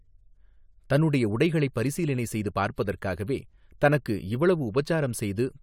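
Nothing in this stretch of speech stands out as a technical fault, so there's nothing to flag here.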